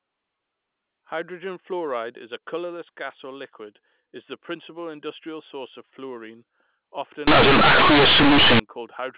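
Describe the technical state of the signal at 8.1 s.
At 8.1 s the signal sits inside a stretch of companded audio read as linear, running from 7.27 to 8.60 s. The A-law bytes are played as plain linear 8-bit samples without expansion, so quiet material swings as wide as loud, producing harsh, very loud buzzing distortion and heavy noise in the gaps.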